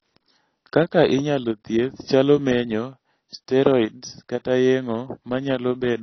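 From start to finish the speech has likely been through low-bitrate AAC compression, consistent with AAC-LC at about 24 kbps. The encoder discards everything above 6 kHz, so the audio sounds dull and smeared, with plainly audible warbling on sustained sounds and fizzy, thinned sibilants.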